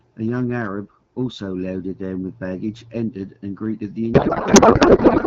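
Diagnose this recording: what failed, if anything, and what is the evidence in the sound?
From 4.13 s to the end at 5.27 s the speech collapses into garbled noise and warble that barely tracks it. This is a codec payload misread. The AMR-WB frames, clear before 4.13 s, suggest octet-aligned packing decoded as bandwidth-efficient, which misplaces every field.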